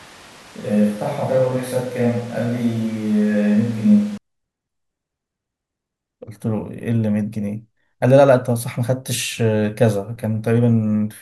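From the start until 4.18 s the speech sounds roomy, hollow and thin in the bass, with room noise about 25 dB below it, then snaps close and full. That sudden change at a steady level points to a likely switch to a distant microphone, not added reverb.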